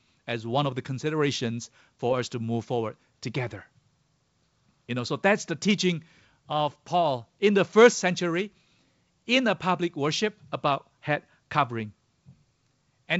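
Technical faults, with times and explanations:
Nothing stood out on listening to this speech carried over wideband telephone coding.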